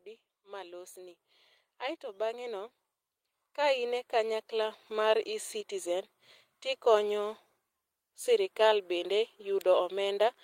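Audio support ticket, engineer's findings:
Automatic gain rising, 0.05–2.77 s: voice and background noise floor swell together by about 8 dB. AGC judged input too quiet, ramped gain slowly. Recurs 3.55–5.55 s, about 6 dB, same gradual lift of speech and room noise.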